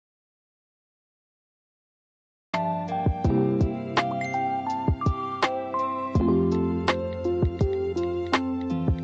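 The audio opens in an audio dropout to silence: from the start until 2.53 s there is silence with no room tone, likely from lost input.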